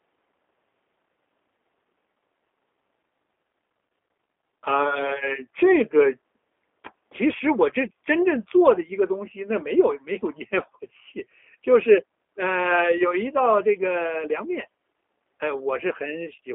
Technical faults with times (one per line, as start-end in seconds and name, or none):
0.00-16.55 G.729 codec